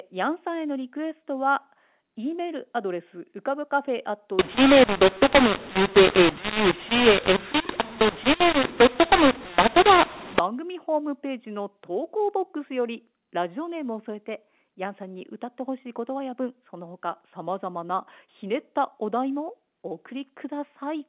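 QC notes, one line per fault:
4.39–10.39 s, mu-law and A-law mixed up: speech turns harsh and distorted with noise filling pauses, as A-law telephone samples were decoded as mu-law.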